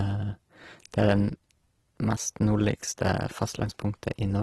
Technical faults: Opus compression

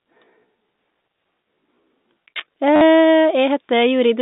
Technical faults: time-stretched section; packet loss with last packet repeated

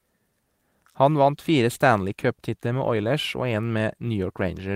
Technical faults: none

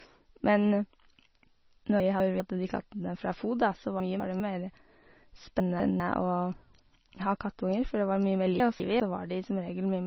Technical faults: MP3 compression; chunks out of order

